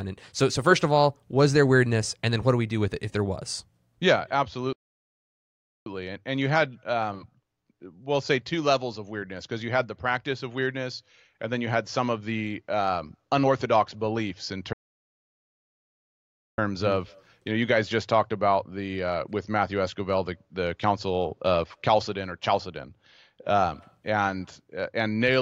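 At 4.73 s the sound cuts out mid-flow and stays silent for about 1.13 s, then resumes at 5.86 s; a longer gap follows from 14.73 s to 16.58 s, about 1.85 s. Each is a playback stall, likely the player starving for data or its thread being blocked.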